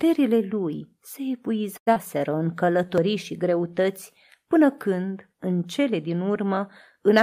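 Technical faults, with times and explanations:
1.77–1.89 s, short stall from a late packet: a packet arrived late, so the receiver held the last sound for 91 ms, then resumed without loss.
1.93–1.98 s, skip ahead: roughly 100 ms of speech was dropped while later audio waited, and playback jumps forward, joining both sides almost directly.
2.18–2.87 s, jitter buffer slow-down: repeated pitch periods add 85 ms to rebuild the reserve, so speech runs at 89% speed at unchanged pitch.
2.98 s, dropped buffer (overrun): a jump of about 15 ms, likely from samples overwritten before the program collected them, joins both sides with no silence.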